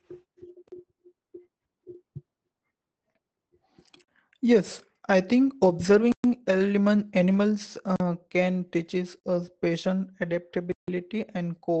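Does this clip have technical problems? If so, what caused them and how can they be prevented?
Yes, two kinds of fault are audible.

The whole clip carries Opus voice compression in its SILK speech mode. The speech sounds muffled and slightly hoarse and robotic, because the linear-prediction coder rebuilds the voice from a coarse model of the vocal tract and a crudely coded excitation. The damage is plainly audible and fits a bitrate around 12 kbps. On a spectrogram, energy stops at a hard ceiling near 8.6 kHz, with smeared, blotchy harmonics below it. To prevent it, encode at a higher bitrate, or with fullband settings, when bandwidth allows.

Blocks of digital silence cut the audio six times. Four are 40 ms long, at 0.68, 4.04, 7.96 and 9.2 s. One lasts 120 ms, from 6.12 to 6.24 s, and one lasts 160 ms, from 10.72 to 10.88 s. Each is heard as a short hole. The lengths are all multiples of 40 ms, which points to output buffers not being filled in time. 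On the waveform, each appears as a nearly flat line with abrupt vertical edges. To prevent it, give the audio thread larger buffers or higher priority so that it never underruns.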